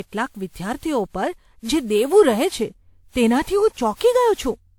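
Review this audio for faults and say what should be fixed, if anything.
Generation loss runs throughout the speech: swirly, hollow smearing with blurred attacks and nothing above 19.8 kHz, likely from around five successive WMA encodes near 96 kbit/s. Keep a lossless master and encode to a lossy format only once, at the final delivery step.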